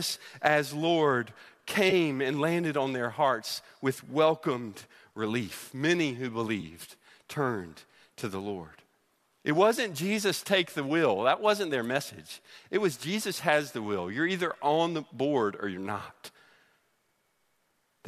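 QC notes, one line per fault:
1.90–1.93 s and 6.61–6.64 s, AAC frame loss with concealment: two brief smeared, noisy patches, the first just before "and landed on their", each lasting only a few hundredths of a second. About 20 ms of coded audio went missing each time, consistent with two lost frames from the likely low-delay AAC stream, and the decoder bridged the gap by reusing the last good spectrum with altered phase, so the patch sounds blurred rather than silent.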